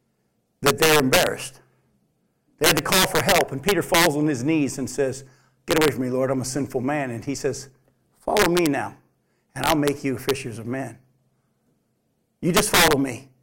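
Integer overflow breaks into the speech at 0.66–1.27 s, 2.64–4.07 s, 5.71–5.88 s, 8.37–8.66 s, 9.64–9.88 s, 10.29 s and 12.57–12.93 s. The signal was pushed about 1 to 10 dB past the integer limit, and the peaks wrapped to the opposite sign instead of holding at full scale. Clipping would flatten them into a buzzy rasp. Here each peak flips across the whole range and bursts out as a violent crack, harshest in the long 2.64 s stretch.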